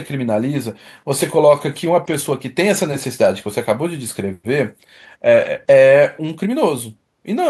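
No technical faults can be heard anywhere in the speech recording; the signal stays continuous and steady throughout.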